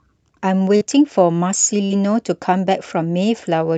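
Speech over a call path whose audio stops at about 8 kHz, with two short concealed packet losses at 0.76–0.82 s and 1.86–1.91 s. Each time roughly 40 ms never arrived and was patched by extending the preceding sound, giving a brief smear visible as smoothed, repeated spectrogram texture.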